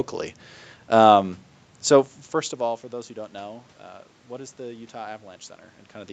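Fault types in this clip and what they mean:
There are no fault types in this clip.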